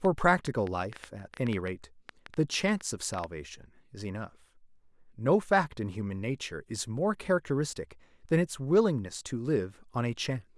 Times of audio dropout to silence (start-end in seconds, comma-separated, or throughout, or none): none